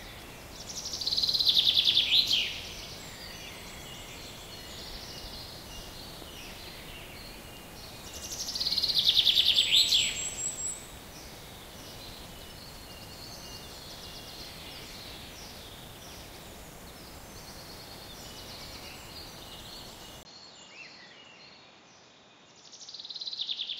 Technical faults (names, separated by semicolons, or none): input switched to a poorer device